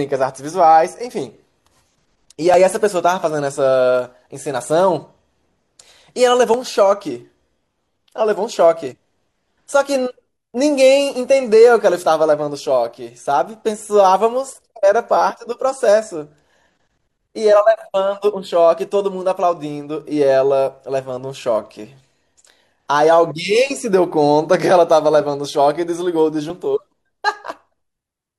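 At 2.54, 6.54, 10.54 and 14.50 s the speech skips briefly, each time by about 33 ms. This is overlap between stream segments: adjacent 4-second segments claimed the same stretch of time, and the player discarded the overlapping portion even though it held no duplicate sound. The waveform jumps forward. Unlike a dropout, no silence or gap is heard, and the 4-second spacing matches the segment length.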